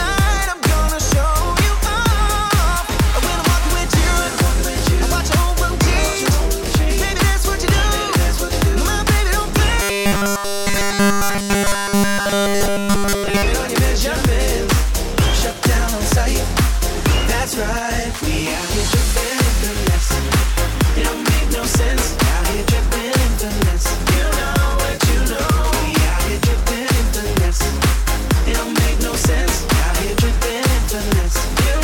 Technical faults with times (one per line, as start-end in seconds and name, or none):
9.82-13.43 robotic sound from repeated short buffers